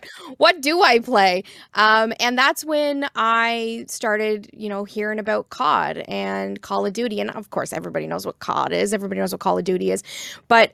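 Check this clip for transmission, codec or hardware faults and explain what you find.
No transmission, codec or hardware fault can be heard anywhere in the speech, and the signal stays continuous throughout.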